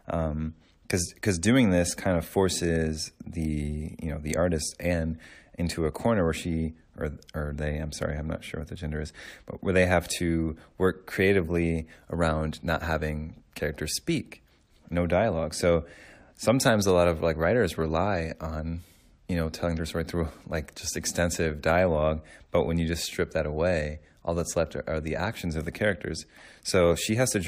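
No technical faults can be heard in the signal at any point in the recording.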